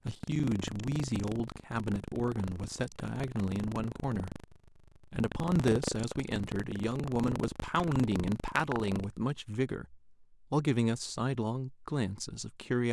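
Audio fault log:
0.00–9.05 s, buffer tearing: a robotic rattle at 25 Hz runs through the speech, matching a buffer that cycles every 40 ms. The writer and reader of the ring buffer have drifted until they cross inside each period, so about a tenth of every buffer plays audio roughly 150 ms stale, butted against current audio with hard joins. Unlike dropouts, the gaps hold old sound rather than silence, and unlike a repeat-stutter, the buzz stays steady.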